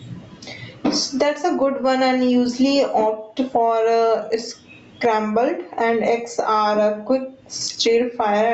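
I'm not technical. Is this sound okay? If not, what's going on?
No. Gain pumping runs through the whole clip. Loud and soft parts end up closer in level, so the sound is squashed. Likely cause: the microphone level is set far too high, and an automatic limiter keeps hauling it down.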